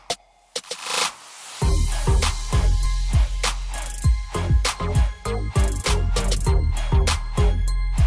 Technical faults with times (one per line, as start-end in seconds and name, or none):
none